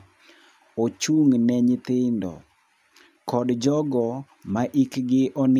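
No faults audible in this speech recording; nothing to log.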